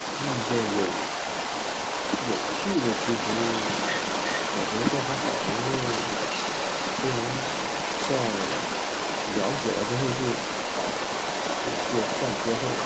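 From the first second to the end of the speech, a second copy of the talker trails about 0.38 s behind, only a little quieter than the direct voice, all within a band that stops near 8 kHz. This is an echo leak: the far end was likely playing the call on a loudspeaker, and its echo canceller let the microphone's pickup of that playback return down the line.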